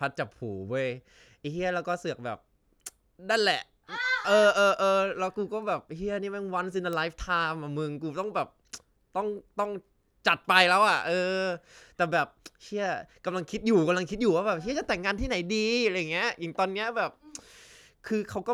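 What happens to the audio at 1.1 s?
Nothing goes wrong at 1.1 s; the speech plays through that moment intact, with no dropout, click or distortion.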